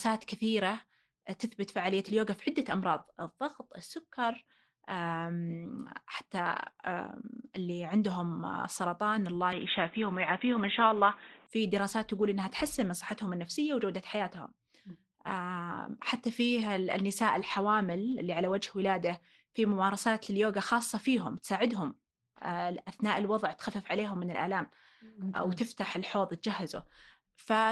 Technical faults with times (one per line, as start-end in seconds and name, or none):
6.59-6.81 lost packet rebuilt from error correction
6.71-6.79 short concealed packet loss
9.52-11.47 input switched to a poorer device